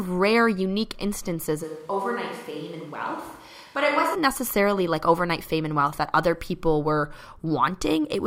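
A speech recording with one switch to a distant microphone, from 1.65 to 4.14 s. Right after "rare unique instances", the voice turns suddenly roomy and hollow. The bass thins out and the level falls by roughly 10 dB. Background noise rises to about 30 dB below the speech. The close sound snaps back just before "necessarily like overnight fame". The likely cause is a dropout of the close microphone, with a farther one, such as a camera's, filling in.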